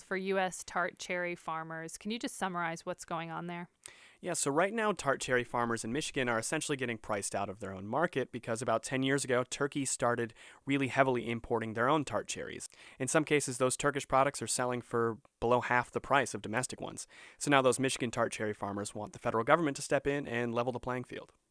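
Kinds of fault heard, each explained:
No kinds of fault are heard in the speech, so there are none to explain.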